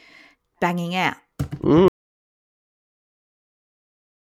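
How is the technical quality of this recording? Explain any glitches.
The recording has one real problem: at 1.88 s the speech cuts off and never returns. It's an audio dropout to silence running right to the end, about 2.4 s of silence with no room tone. That points to the input being lost, likely a disconnected device or accidental mute, while recording carried on.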